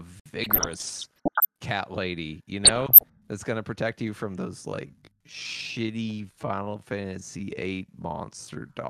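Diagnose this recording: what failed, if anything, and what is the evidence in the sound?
Bursts of noise blips sit over the speech from 0.44 to 1.45 s and again from 2.65 to 3.03 s. This is DAB burbling at the codec stage: residual bit errors slip past error correction into the MP2 frames, and corrupted scale factors make individual sub-bands jump in level.

From 4.65 s to the end, the pace drops abruptly to 0.64 times normal speed while the pitch holds, and the speech drags. This is likely a time-stretched section from editing or playback software, which lengthens the audio by repeating short pieces rather than resampling.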